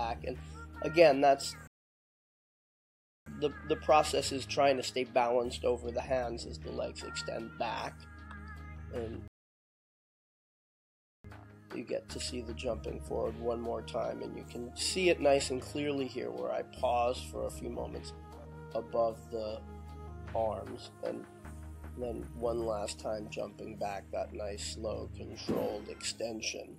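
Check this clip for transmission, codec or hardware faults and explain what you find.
Two rebuffering stalls, both playback-side rather than codec or hardware. The first runs from 1.67 to 3.26 s and the second from 9.28 to 11.24 s. Each time the player drained its downloaded audio and simply waited for more to arrive, so the sound drops to dead silence and then picks up exactly where it left off. Nothing goes missing. The stalls just add about 1.6 s and 2.0 s of gap.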